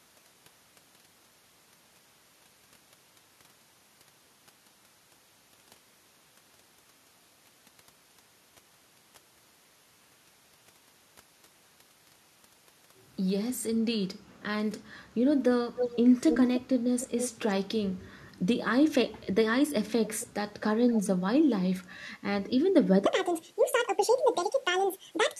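Around 15.76 to 15.96 s, 16.28 to 16.6 s and 17.0 to 17.5 s there's an echo leak: a copy of the speech comes back 289 ms late, only about 5 dB down in the first two bursts and about 10 dB down in the third, so it's quite obvious. It returns faintly at 20.2 to 20.27 s, 20.61 to 20.65 s and 20.91 to 21.01 s, now 261 ms behind and about 20 dB down. The likely cause is a far-end speakerphone whose echo canceller let its own pickup slip back into the call.

From 23.06 s to the end, there's a section at the wrong speed. It runs 1.74 times too fast, so pitch jumps close to ten semitones along with the tempo, and the speech turns high and rushed. That's most likely a stretch played against the wrong clock.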